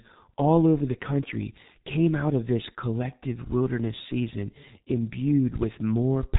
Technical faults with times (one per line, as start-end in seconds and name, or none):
0.00-6.39 G.723.1 codec